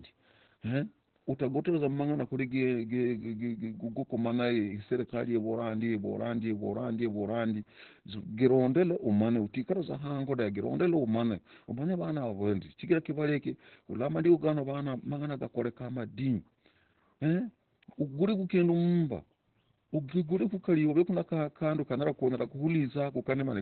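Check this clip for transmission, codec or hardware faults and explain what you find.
One codec fault affects the whole clip. Throughout, the speech sounds muffled, hoarse and slightly robotic, with nothing above 4.3 kHz. This is Opus voice compression: narrowband SILK coding that fits roughly 8 kbps.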